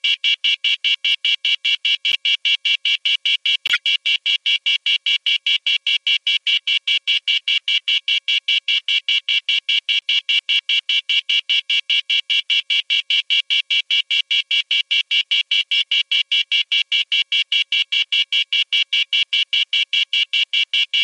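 Corrupt frames decoded at 2.12–2.16, 3.67–3.80, 10.01–10.06 and 15.75–15.82 s: damaged compressed frames were played anyway, putting energy at the wrong frequencies as brief chirps or noise bursts. They are loud, apart from a faint one near 10.0 s. Unlike concealed loss, foreign sound is added.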